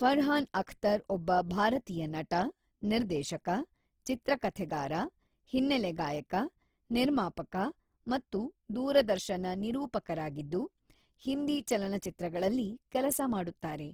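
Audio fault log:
throughout: Opus compression, likely at a low rate around 16 kbps in its CELT music mode. Bits run short, so bands get folded or noise fill, making the speech plainly grainy and rough. A spectrogram shows content reaching 20.3 kHz, with few gaps but noisy-textured.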